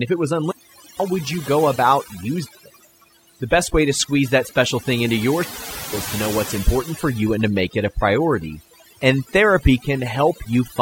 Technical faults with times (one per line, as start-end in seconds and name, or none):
0.00-10.81 overdone noise removal
0.43-1.04 wireless microphone squelch dropout
2.41-2.65 wireless microphone squelch dropout
5.36-5.97 wireless microphone squelch dropout